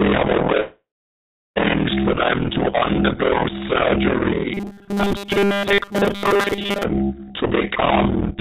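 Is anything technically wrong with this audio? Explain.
Yes, there are two faults.

Call audio freeze, 0.6 to 1.58 s: the packets were likely held up in transit, so the jitter buffer ran dry. The receiver stretched the last sound into a fading buzz, and about 0.71 s of that 0.96 s stretch is silence. Nothing is lost when the audio resumes; the same material simply plays about 0.96 s later than it would have.

Robotic sound from repeated short buffers, 4.54 to 6.83 s: new audio likely arrived too seldom, so the software looped the most recent 5 ms fragment while real audio was skipped. About 70 percent of this stretch is repeats, which forces a fixed 200 Hz buzz onto the sound. The result is a rigid, metallic drone that only loosely tracks the underlying audio. Throughout the clip, the G.711 call path leaves nothing above 4 kHz.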